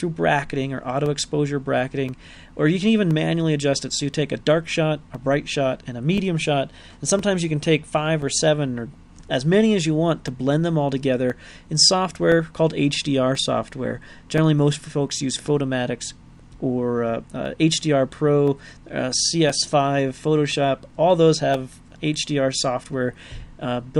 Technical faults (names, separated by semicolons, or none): periodic USB or driver dropouts